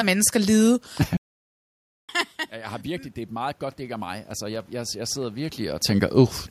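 At 1.17 s the output goes silent for about 0.92 s, until 2.09 s, a playback stall whose likely cause is that the player ran short of data or had its processing thread blocked. The speech breaks off mid-flow and the dead gap is clearly audible. It then resumes with "jeg har", carrying on where it stopped.

From 2.82 s to 5.92 s, just after "jeg har", automatic gain rising sets in. The signal reaching the microphone had dropped by about 14 dB, consistent with the talker moving away, and the gain control responds by raising its gain by about 7 dB over those three seconds. The speech and the room noise swell together as a slow, even climb in loudness rather than a step.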